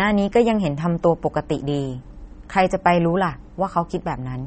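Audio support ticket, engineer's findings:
Watery, swirly speech throughout, with nothing above 8.4 kHz. Likely MP3 compression at about 32 kbps, dropping the treble and weak lines. Spectrogram: hard ceiling at 8.4 kHz and flickering gaps below it.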